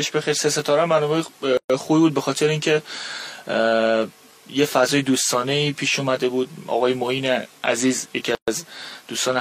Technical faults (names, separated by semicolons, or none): gap at a join of encoded pieces